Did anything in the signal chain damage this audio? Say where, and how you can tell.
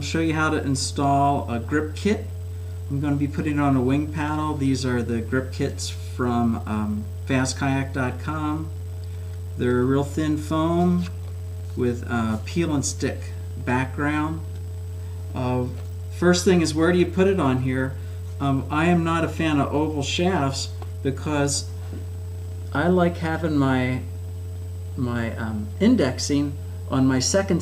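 Yes. Two isolated sharp clicks, one at 4.28 s and one at 26.01 s, each showing in the spectrum as a thin vertical line spanning the full band. Nothing audible is missing around either point, which points to dropped samples, likely at the driver or buffer stage: a few samples, a tiny fraction of a millisecond, went missing, so the waveform leaps from one value to a later one and that step is heard as the click.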